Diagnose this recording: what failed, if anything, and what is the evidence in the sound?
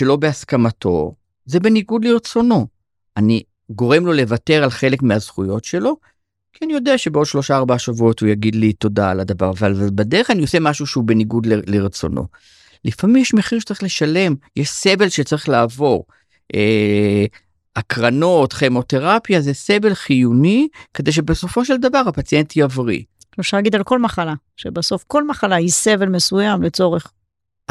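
Nothing failed: the recording shows no audible evidence of any fault.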